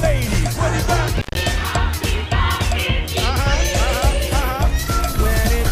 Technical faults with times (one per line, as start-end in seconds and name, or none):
1.17-1.40 intermittent contact